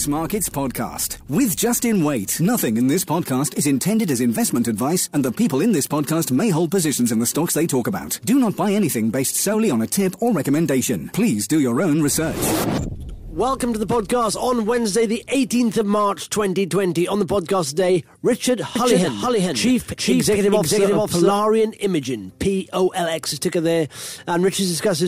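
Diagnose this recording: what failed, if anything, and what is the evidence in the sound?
A doubled audio track runs from 18.76 s to 21.32 s. A full-band second copy trails the original by roughly 0.4 s at about the same level, with no decay or room colour, and it appears and disappears abruptly at those two points. A fixed offset with a dry, clean start and stop points to the sound being picked up a second time through a slower capture path, or likely an edit that left two out-of-step copies overlapping.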